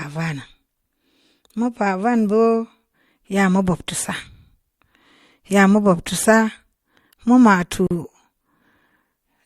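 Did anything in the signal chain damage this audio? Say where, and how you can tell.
Yes. At 7.87 s the speech drops out for about 40 ms, to 7.91 s, then resumes exactly where it stopped: a gap at a join of encoded pieces, introduced at the codec stage. The edges of the silence are smeared by the codec. The audio was encoded in separate segments and concatenated untrimmed, so one segment's padded final frame and the next segment's encoder start-up delay both remain as dead air.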